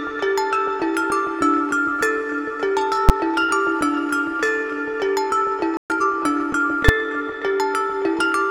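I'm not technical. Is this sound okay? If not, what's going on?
No, there are three kinds of fault.

Invalid numbers at full scale, at 3.09 s and again at 6.89 s: each time you hear a single sharp bang. A calculation went wrong and produced numbers that aren't real values, so the output was pushed to one extreme value for a very short stretch, about 10 ms the first time and 5 ms the second. Those stretches are too short to hear as anything but one loud crack.

Playback stall, from 5.77 to 5.90 s: the sound stops dead for about 130 ms, a brief but noticeable gap in the middle of the audio, and then picks up again. The likely cause is that the player ran out of audio to play, or was briefly held up by something else on the computer, so it had nothing to send out until it caught up.

Time-compressed catch-up, from 5.90 to 6.14 s: right after that gap, the audio runs about 1.5 times faster than normal for a quarter of a second, yet the pitch stays the same. 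To make up for lost time, the player trims out tiny slices and blends the remaining pieces together, so this part sounds rushed.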